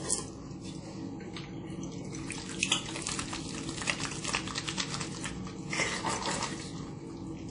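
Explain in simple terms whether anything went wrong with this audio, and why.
The sound was likely squeezed hard by WMA compression from start to finish: nothing above 10.1 kHz survives, leaving it dull, washy and ringing, with breathing hiss.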